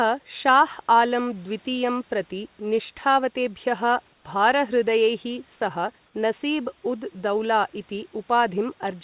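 At 4.14 s and 6.06 s, gaps of 100 ms and 80 ms lose the real room background, replaced by flat, featureless hiss about 4 dB and 2 dB quieter. This is comfort noise in place of the background, likely from discontinuous transmission filling the pauses with synthetic noise.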